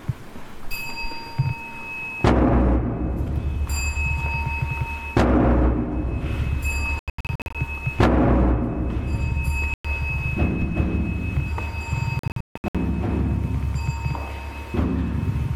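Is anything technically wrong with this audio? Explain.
Yes. Bluetooth dropouts at 6.99–7.55, 9.74–9.85 and 12.19–12.75 s: packets likely arrived too late and were dropped, so the sound cuts abruptly to silence, in several short holes during the first and last, then resumes further along, as if it had kept playing.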